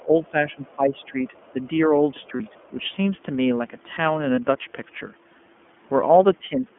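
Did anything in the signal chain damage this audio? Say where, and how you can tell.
Yes. At the codec stage, the whole clip has passed through the iLBC codec. The speech is confined to a telephone band of about 200 Hz to 3.4 kHz, with nothing above it, and it carries a plainly audible rough, slightly synthetic grain. That fits iLBC's 13.33 kbps mode with 30 ms frames, where each frame's excitation is coded on its own. The texture is the coder's model of the voice replacing the original waveform detail.

In call processing, the speech is suppressed in double talk at several points. The talker's level sinks from the start to 1.16 s, by as much as about 15 dB at the deepest point. Shorter, shallower dips follow at 1.53 to 1.69 s and 2.70 to 2.78 s, and another stretch is pulled down from 6.39 s to the end. These dips are likely the echo canceller's suppressor clamping the microphone path while it judged far-end sound to be present.

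Also in call processing, the other side's voice leaks through from 1.34 to 1.67 s. A second, very faint voice sits far below the talker, at something like 35 dB down, and is heard only as a trace. This is likely loudspeaker echo that the canceller did not fully subtract from the microphone signal. The leak overlaps the brief suppression at 1.53 s, which is the kind of confusion that trips a double-talk detector.

At the network stage, there are lost iLBC frames at 2.37 s and 4.34 s, each a 30 ms gap. In each gap the decoder fills in by repeating the last pitch cycle with added noise. This sounds like a momentary held, faintly buzzy vowel rather than silence. Because iLBC frames do not depend on their predecessors, the voice snaps back to normal immediately after each gap, with no smeared recovery.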